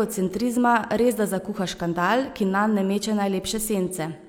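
A speech recording with nothing technically wrong to report.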